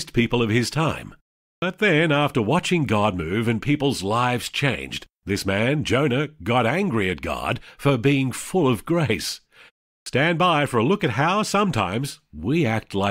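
Speech with a clipped start after a pause: the output device sleeps during short silences and swallows about 40 ms on waking, at 1.58–1.62 s before "then after watching" and at 10.02–10.06 s before "by for a look". Unlike muted pauses, actual speech onsets are lost, not just background.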